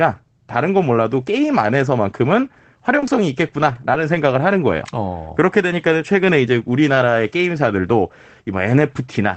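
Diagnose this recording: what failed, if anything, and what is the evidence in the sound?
Scattered short gaps from network packet loss, between 2.89 and 4.15 s: about five brief ticks and smears, none longer than roughly 30 ms, each patched by extending the preceding sound. Unlike a single long dropout, the 8 kHz-limited call audio stays clear between hiccups.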